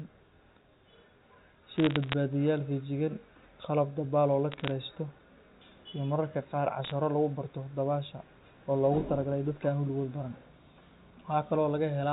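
Between 1.76 and 2.13 s, again from 4.52 to 4.71 s, and briefly at 6.84 to 6.92 s, sharp ticks and a short burst of crackle sit on top of the telephone-band speech. These are bit errors on a digital phone line: stray flipped bits, at well under one percent, each corrupting a single sample. A flipped sign or high-order bit throws that sample far off and produces a click. Unlike packet loss, nothing drops out or repeats, and the speech underneath stays intact.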